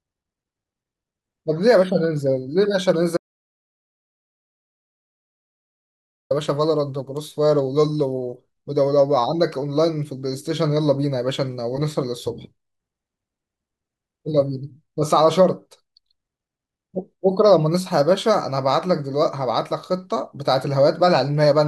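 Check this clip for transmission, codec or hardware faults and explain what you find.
One fault stands out: an audio dropout to silence from 3.17 s to 6.31 s. The speech cuts off abruptly and returns just as abruptly. About 3.1 s of material is missing. The gap is dead digital silence, with no room tone or background at all. That points to a lost input while the recorder kept writing zeros. A disconnected device, a failed link or an accidental mute is the likely cause.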